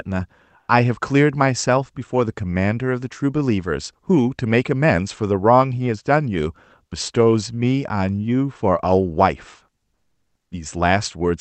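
Comfort noise in place of the background at 0.59–0.67 s and 9.95–10.51 s in this speech clip turns the pauses into flat, featureless noise, about 4 dB louder and then about 4 dB quieter. Opus discontinuous transmission likely stopped sending during the pauses while the receiver filled the gaps with synthetic noise.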